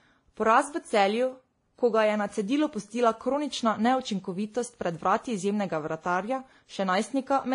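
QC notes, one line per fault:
Throughout: transcoding between lossy codecs. The speech has nothing above 10.6 kHz and carries two overlaid sets of artefacts, one from each codec in the chain. The two sets of artefacts are heard together rather than as one consistent codec sound. The likely cause is an earlier lossy encode, consistent with WMA at around 48 kbit/s, re-encoded to Vorbis at around 32 kbit/s. The second pass wasted bits on the first pass's artefacts and added its own, while the lower cut-off from the chain remained.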